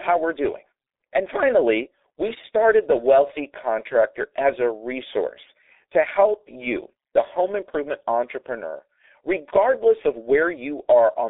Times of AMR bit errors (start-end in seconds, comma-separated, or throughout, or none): none